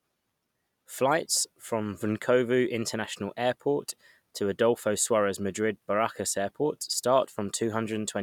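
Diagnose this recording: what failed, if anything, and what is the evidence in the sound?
Nothing failed in this recording. No stage of the chain, from capture through to playback, leaves any audible evidence of a fault.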